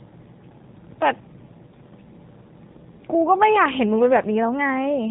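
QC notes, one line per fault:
throughout, G.729 codec: the speech has that rough, slightly synthetic VoIP edge the whole way, and the damage is plainly audible. The sound gets rebuilt from a vocal tract filter, a pitch predictor and a handful of pulses per 10 ms frame rather than the actual waveform, so the texture goes grainy. Everything above 4 kHz is gone, which dulls the consonants. The overall character fits an 8 kbit/s G.729A stream.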